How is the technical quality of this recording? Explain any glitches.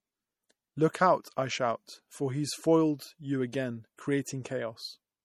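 The recording carries plainly audible MP3 compression from start to finish. Nothing reaches above about 18.7 kHz, where the encoder has cut the treble, and the damage points to a low bitrate, around 48 kbps. The likely cause is an encoder short of bits, dropping weak frequency lines that then flicker on and off between frames. The speech sounds watery and swirly, with metallic chirps on s sounds and smeared onsets.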